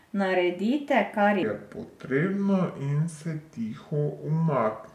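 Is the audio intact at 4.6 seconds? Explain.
No. A wrong sample rate fault runs from 1.43 s to the end of the clip, so 4.6 s falls inside it. The samples are clocked out more slowly than they were captured, with no rate conversion, so speed and pitch drop together: the speech runs at 0.726 times its proper speed and sits about 5.6 semitones low. That ratio fits 44.1 kHz audio played at 32 kHz. The speech sounds deep, dragged and sluggish.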